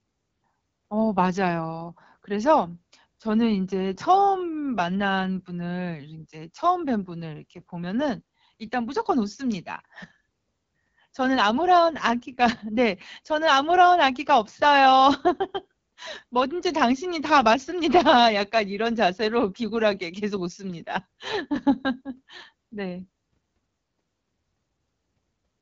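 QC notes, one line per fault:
throughout AMR wideband (HD Voice) codec. Rough, raspy speech from coarse pulse modelling, nothing above 7.3 kHz. Fits the low 8.85 kbit/s mode.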